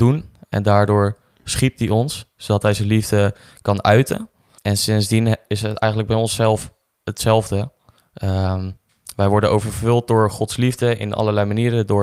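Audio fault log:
No faults heard anywhere in this speech recording.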